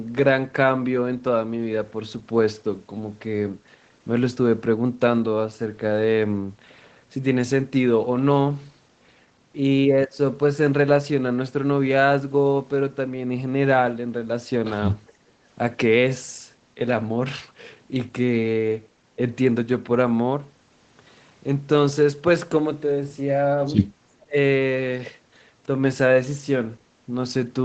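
Speech recorded over a call, band-limited to 8 kHz as expected for an Opus path. From 15.07 to 15.12 s a very faint delayed copy of the voice played on the loudspeaker appears, trailing by 415 ms. This is likely an echo leak from a loudspeaker the canceller missed. Between 15.25 and 15.44 s the background is gated by the echo canceller. Room sound dips about 8 dB for roughly a fifth of a second, then returns. From 24.24 to 24.36 s the voice drops deeply for about a tenth of a second. Speech was likely suppressed in double talk while the far side spoke.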